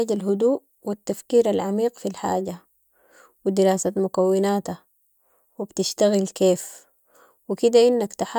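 Nothing technically wrong turns up anywhere in this bit of speech, so there's no fault to point to here.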